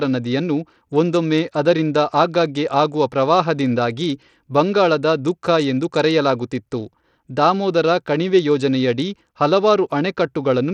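Throughout the speech, treble flickers and drops away under a gritty, aliased haze, likely Bluetooth SBC compression starved of bits, which fits a bitrate near 80 kbps.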